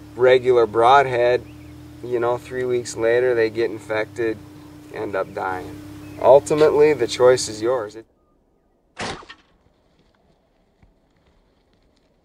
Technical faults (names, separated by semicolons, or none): none